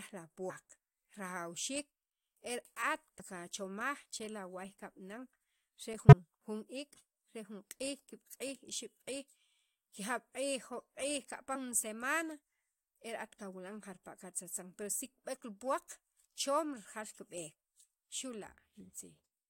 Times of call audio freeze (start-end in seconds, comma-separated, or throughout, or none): none